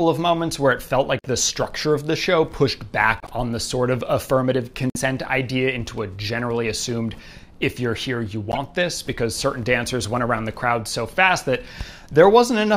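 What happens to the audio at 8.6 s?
Just before 8.6 s, from 8.52 to 8.57 s, there is a corrupt frame decoded: a couple of compressed frames arrived with flipped bits, and the decoder played them without rejecting them. Misread gains and spectral codes put energy at frequencies that do not belong to the signal for the length of those frames. The result is a short chirp or burst of noise, roughly 60 ms long and peaking at about -10 dBFS.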